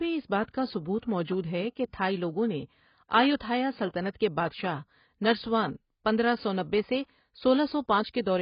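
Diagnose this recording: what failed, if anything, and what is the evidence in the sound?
Dull, smeared speech with nothing above 5.1 kHz and warbling sibilants throughout. This is likely heavy AAC compression at the codec stage, consistent with AAC-LC near 16 kbps.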